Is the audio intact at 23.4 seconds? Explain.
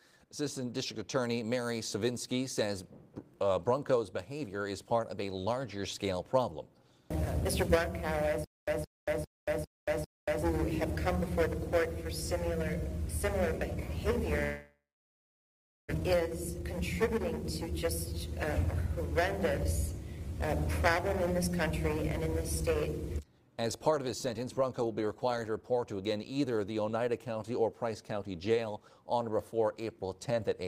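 No, a jitter buffer speed-up runs from 22.63 to 23.89 s. With more audio queued than the buffer's target, the receiver cut short pitch-period pieces repeatedly, about a tenth of a second in all, so the sound plays at 109% speed, hurried but unchanged in pitch.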